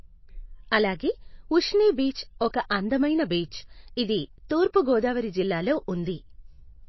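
From start to finish the speech carries plainly audible codec damage, most likely from MP3 compression at a low bitrate, roughly what a 24 kbps stream would give. Nothing is present above about 5.8 kHz, where the encoder has cut the treble to save bits, so the sound is dull and s sounds lose their edge. Weak frequency components drop in and out between frames, giving a watery, swirling texture, and consonant attacks are smeared.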